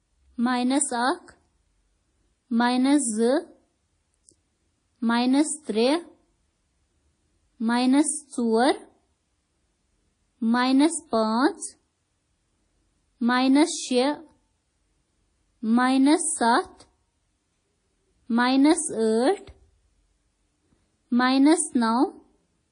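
From start to finish the speech carries two overlapping layers of coding damage, and nothing above about 10.1 kHz survives. Two different sets of coding artefacts are heard together, which is the likely signature of transcoding between lossy codecs, consistent with a low-rate WMA pass near 32 kbit/s followed by MP3 near 48 kbit/s. A single codec would leave one consistent artefact character. Here the two kinds clash.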